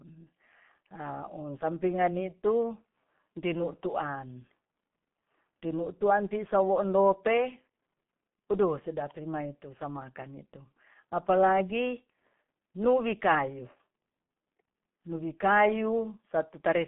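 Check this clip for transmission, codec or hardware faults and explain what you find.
One codec fault runs through the whole clip. The speech sounds muffled and hoarse, with smeared consonants and nothing above 3.8 kHz. This is G.723.1 codec damage. Its 30 ms frames and slowly updated voice model blur fast detail, which fits a 6.3 kbit/s telephone path.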